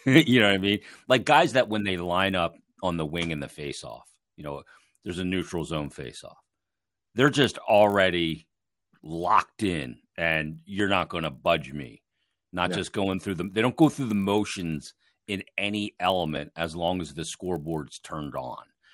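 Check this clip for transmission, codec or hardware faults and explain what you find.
One fault runs through the whole speech clip: a resampler restarted on every block. Each 20 ms block is converted in isolation, apparently doubling 24 kHz to 48 kHz, so every block edge carries a small error. The result is a 50 Hz buzz that, unlike mains hum, disappears in pauses.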